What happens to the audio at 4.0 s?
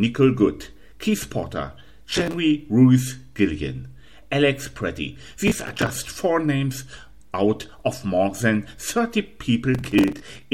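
Nothing goes wrong at 4.0 s; the audio carries on intact through that moment with no audible fault.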